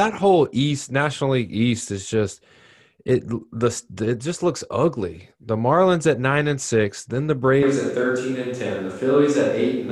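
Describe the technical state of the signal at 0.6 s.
At 0.6 s the speech signal is intact, with no audible technical fault at that moment.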